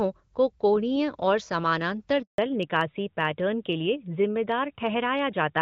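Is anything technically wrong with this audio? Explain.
Yes, there are two related faults: a handover gap followed by a fallback to narrowband.

At 2.22 s, just after "को कोणीय और समानांतर", the speech dies away and stays silent for 160 ms, until 2.38 s. No speech frames arrived while the call was moved between networks, so the audio fades within a few tens of milliseconds and whatever was said during the switch is lost.

From 2.38 s to the end, the call continues in narrowband. Before the handover, the wideband sound fits HD Voice (AMR-WB at around 12.65 kbit/s) with only light coding damage. After it, the codec has dropped to an older narrowband mode, consistent with AMR-NB at around 12.2 kbit/s. Nothing above 4 kHz remains, so the speech sounds duller and rougher.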